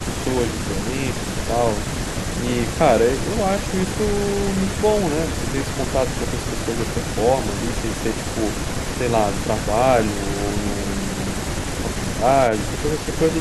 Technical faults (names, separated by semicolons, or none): none